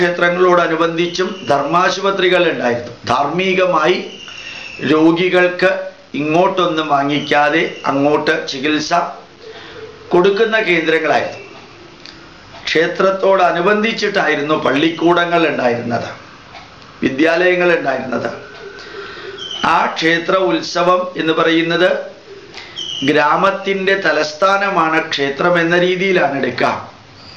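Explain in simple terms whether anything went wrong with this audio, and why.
Nothing went wrong with this audio that a listener can pick out. No moment in the recording stands out as damaged or disturbed, so there is no time to point to.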